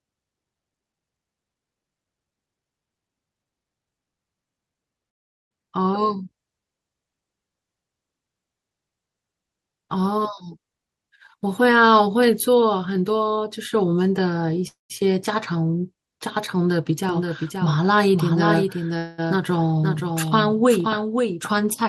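Call audio freeze at 5.09–5.53 s: the sound stops for 0.42 s, almost all of it silence after a brief fading tail, then resumes where it left off. This is likely packets held up in transit until the jitter buffer ran dry, so a gap is inserted but nothing is lost.

Jitter buffer speed-up from 10.70 to 12.77 s: the speech runs at about 120% speed with unchanged pitch and sounds hurried. The receiver was cutting many short pitch-period slices, roughly 0.4 s in total, to drain excess buffered delay.

Call audio freeze at 14.67–14.92 s: a 0.22 s hold, likely the buffer running empty again. The last sound continues briefly as a fading buzz, then about 0.15 s of silence, and the audio picks up intact.

Doubled audio track from 17.09 s to the end: a dry, full-band second copy cuts in abruptly, about 5 dB quieter and roughly half a second behind, with no decay or room colour. This is likely a second capture path or an edit holding two out-of-step copies.

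Call audio freeze at 18.98–19.20 s: a 0.20 s stall, likely another buffer underrun. It is filled entirely by the last sound stretched into a fading buzz, with no silence, before the audio continues without loss.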